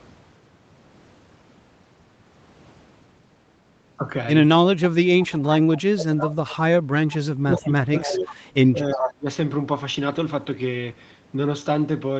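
A speech recording carried over a call path, with nothing above 8 kHz and the coding noise of a low-rate Opus stream, shows two recurring faults. Echo leak appears at 5.19–5.79 s, 6.24–6.56 s, 7.10–7.18 s, 8.02–8.34 s and 8.92–9.11 s. Each time a copy of the speech trails the original by about 0.35 s, sometimes around 20 dB down and at 8.92 s only about 5 dB below. The delay is identical every time, which separates it from room reverberation, whose smeared tail would not repeat at one fixed lag. A far-end loudspeaker is the likely cause: its echo canceller let part of the microphone pickup return down the line. Speech suppressed in double talk hits 5.85–6.34 s, 7.35–8.36 s and 8.72–9.29 s. There the talker's level falls sharply, by about 35 dB at worst, and recovers as the overlap ends. These dips coincide with the echo bursts, so they likely come from the canceller turning down both sides at once, not from the talker moving off-microphone or from a gap in the packet stream.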